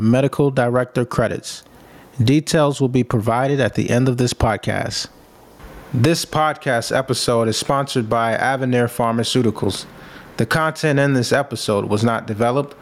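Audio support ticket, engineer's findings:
Gain pumping, throughout the speech. Gain swinging around 20 dB. Likely input gain cranked way too high, with a fast limiter clamping it down. Dynamics squashed flat.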